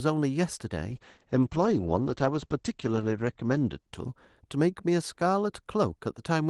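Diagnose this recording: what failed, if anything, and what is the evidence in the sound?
A call bitrate drop failed at the network and codec stage, between 0.91 and 4.93 s. The speech loses its top end, with the audio band shrinking from 12 kHz to 8 kHz. It turns muffled and rougher, and is at its worst for about 2.46 s. The call's bandwidth estimate fell, so the Opus encoder coded more coarsely. The sound fits a fall from 32 kbps to about 11 kbps. Clarity and the 12 kHz band return after 4.93 s.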